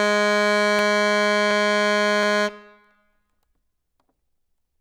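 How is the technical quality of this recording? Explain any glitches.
The music has one recurring glitch: a regular click every 0.72 s from 0.79 to 4.39 s, likely clock drift buffer slips, with a few samples dropped or repeated each time.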